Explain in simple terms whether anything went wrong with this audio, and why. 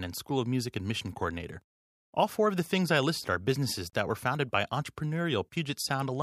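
Something went wrong where two separately encoded pieces of this speech recording were stuck together without trimming. Each encoding pass adds a short stretch of silence at its start and pads the end of its last chunk, and both were left in. The result is a gap at a join of encoded pieces: at 3.90 s, right after "I listed are businesses", the sound drops out for about 34 milliseconds, then resumes with "that were founded by". The pieces look to be about 4 seconds long.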